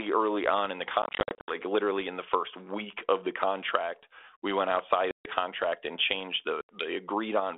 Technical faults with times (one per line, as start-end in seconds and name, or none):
1.02-1.53 packet loss on an ADPCM call
5.11-5.26 packet loss on an ADPCM call
6.61-6.89 packet loss on an ADPCM call